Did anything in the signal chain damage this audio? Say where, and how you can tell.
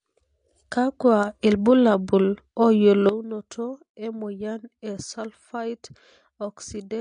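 Yes. At the codec stage, the whole 7-second speech clip shows AAC compression damage, likely from AAC-LC run at a low bitrate. Nothing is present above 9.8 kHz, so the top octave of the speech is gone and it sounds dull. The remaining bands are coarsely quantised and audibly smeared, with a fizzy, warbling edge on sibilants and held vowels. That amount of plainly audible damage fits a bitrate around 32 kbps.

At a digital gain stage, there is a sudden gain jump at 3.09 s, likely a gain setting applied in one step with no ramp. From that instant to the end of the clip, the level sits about 12 dB lower. The speech and the background noise drop together at the same sample. A natural fade would not move the noise floor in lockstep like that.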